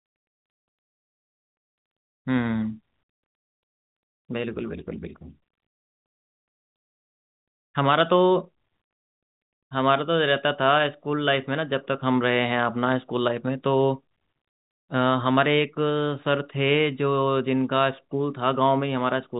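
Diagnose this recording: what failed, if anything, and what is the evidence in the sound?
No stage failed here.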